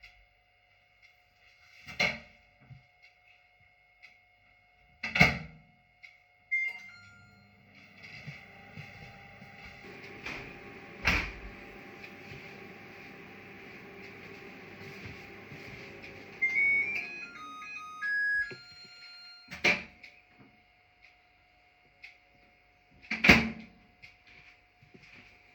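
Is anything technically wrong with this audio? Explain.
Yes. From 0.0 to 9.84 s there is channel delay (comb filtering). One channel arrives around 1.5 ms behind the other, and when the two are summed to mono the shared content cancels at evenly spaced frequencies, with the first notch near 300 Hz. The sound turns hollow and phasey. The notches stay fixed rather than sweeping, which separates this from a flanger or phaser. The narrow regularly spaced holes also differ from the broad top-end loss of low-pass dullness.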